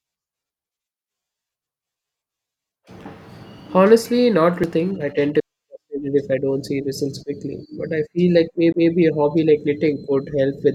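CD skips at 4.63 s, just before "thing I tend to", and 8.73 s, after "but I feel like": the laser jumped tracks, so a tick and near-instant mute precede speech resuming elsewhere, unlike a dropout's mere gap.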